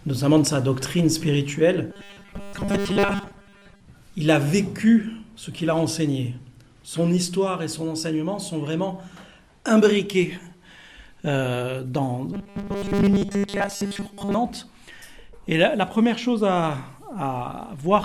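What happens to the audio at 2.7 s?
From 1.90 to 3.81 s the audio takes on a robotic sound from repeated short buffers: a rigid, metallic buzz at 200 Hz. It is likely caused by a 5 ms slice being looped over most of the span while real audio is skipped. Unlike ordinary dropout stutter, it holds a steady pitch.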